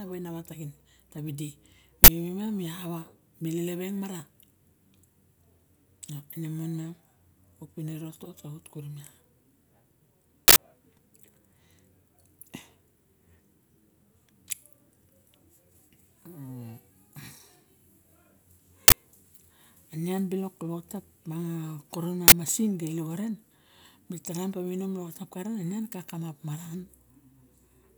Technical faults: uninitialised buffer

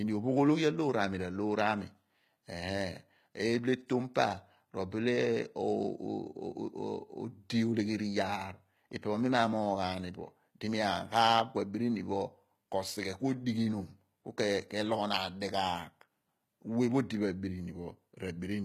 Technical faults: HE-AAC compression

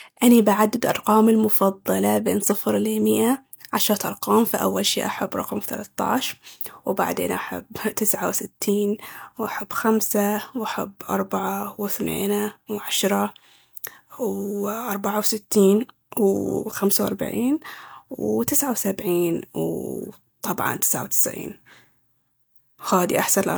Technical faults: none

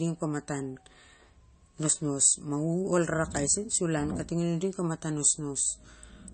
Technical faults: MP3 compression

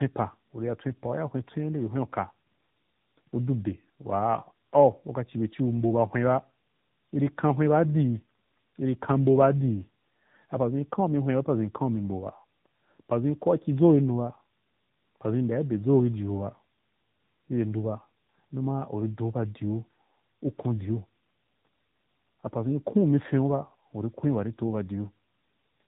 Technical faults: tandem speech coding

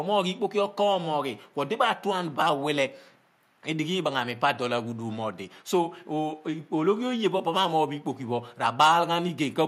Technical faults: none

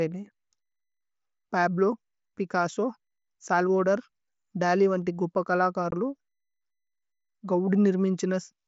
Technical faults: unconcealed Bluetooth headset packet loss

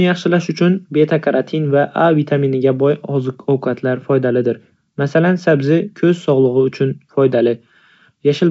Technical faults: none

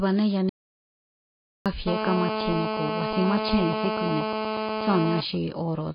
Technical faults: AAC compression; audio dropout to silence; GSM phone buzz

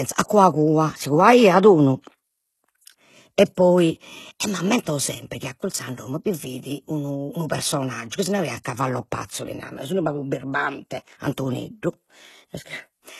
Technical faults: HE-AAC compression

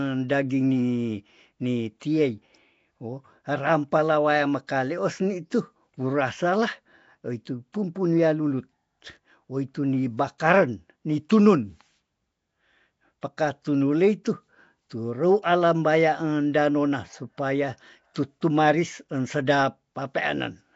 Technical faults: Nellymoser compression

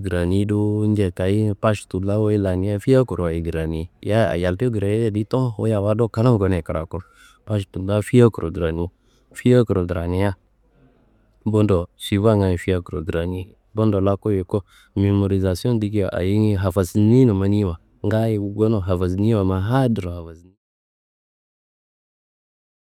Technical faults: none

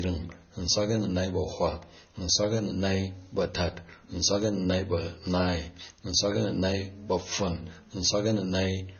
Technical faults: low-bitrate audio saved at a high bitrate

